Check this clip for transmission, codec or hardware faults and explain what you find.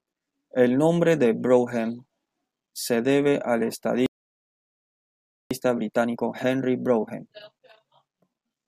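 Two playback faults are present, one following directly from the other.

From 4.06 s to 5.51 s there is a playback stall: the speech stops mid-flow and the output goes silent for about 1.45 s before resuming. The likely cause is the player running out of buffered data, or its output thread being blocked, so nothing reached the output until it recovered.

From 5.51 s to 8.51 s the player applies time-compressed catch-up. Having fallen behind during the stall, it works off the backlog by removing short slices of audio and cross-fading across the joins. The speech runs 1.1 times faster for these 3 seconds while keeping its normal pitch. It sounds slightly hurried.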